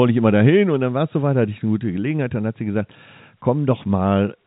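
No technical faults are audible.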